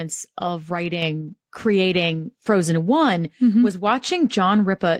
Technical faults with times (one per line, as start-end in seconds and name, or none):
1.02 microphone volume stepped up